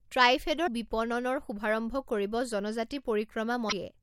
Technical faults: damaged data in a compressed stream

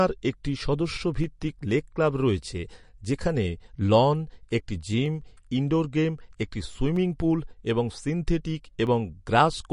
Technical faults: MP3 compression; clock drift buffer slips

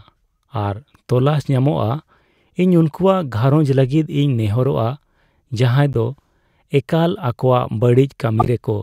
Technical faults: corrupt frame decoded

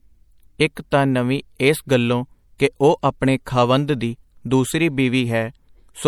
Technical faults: MP3 compression

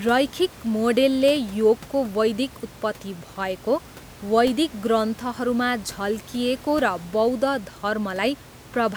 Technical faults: none

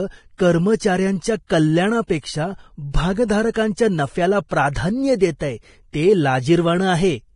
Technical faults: Vorbis compression

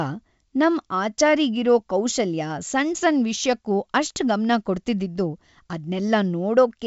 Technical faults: none

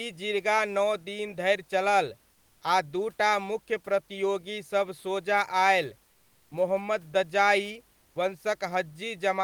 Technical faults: comfort noise in place of the background; onset clipped by the voice detector

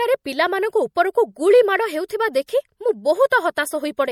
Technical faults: MP3 compression; pre-echo

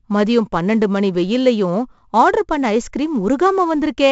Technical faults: 4-bit ADPCM compression

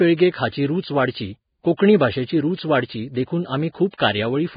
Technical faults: Vorbis compression; pre-echo

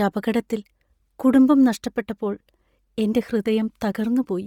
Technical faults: Bluetooth LC3 compression

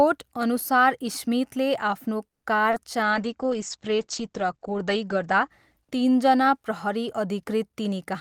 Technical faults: call audio freeze; short concealed packet loss; call bitrate drop

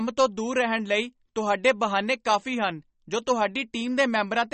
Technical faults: MP3 compression

